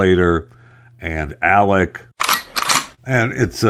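Clock drift between sender and receiver runs through the whole clip. The sender's audio clock is slow, by roughly 2 percent. Its samples arrive a little too slowly for the receiver's playback rate. The jitter buffer therefore keeps draining. The receiver has to add material to stay in step. The result is a faint unsteadiness in the flow of the speech, not one clear glitch.

From 0.08 s to 2.11 s come repeated timing corrections. The receiver stretches the audio here, playing it at about 98 percent speed. Small pieces are repeated, unevenly spaced, always in the lengthening direction. In total they add around 50 ms. Each edit is tiny. The speech sounds slightly dragged rather than broken.

At 2.94 s to 2.99 s there is a short stall from a late packet. The buffer ran empty because the next packet was not there in time. The receiver held the last sound for 29 ms until it arrived, then resumed from the same point. 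Nothing is lost. A sound is briefly drawn out, with a slight buzz or dip. Playback latency grows by 29 ms from here on.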